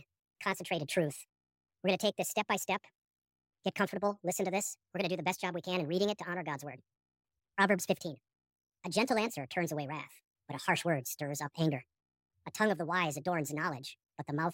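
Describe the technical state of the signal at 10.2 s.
At 10.2 s you're hearing the same wrong sample rate problem that runs through the whole clip. The speech plays 1.5 times too fast and sits about seven semitones high, which fits 32 kHz audio being played back at 48 kHz without conversion.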